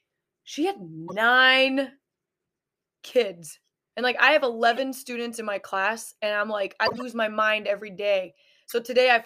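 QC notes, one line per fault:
1.07 to 8.73 s, corrupt frame decoded: short blips and noise bursts at 1.07–1.13 s, 4.71–4.78 s, 6.85–7.02 s and 8.69–8.73 s, where damaged compressed frames were still played. Misread gains and codes put energy at wrong frequencies. The 6.85 s burst spans several frames and is loudest, near -10 dBFS, against roughly -20 to -25 dBFS for the others.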